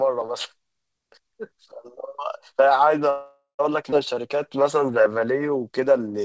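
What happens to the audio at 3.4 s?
At 3.4 s the sound is inside a call audio freeze running from 3.10 to 3.61 s. The receiver stretches the last sound into a fading buzz for about half a second, ending in roughly 110 ms of silence before normal audio resumes. The likely cause is late packets draining the jitter buffer. Since playback picks up where it stopped, nothing is lost, but everything after is delayed by about 490 ms.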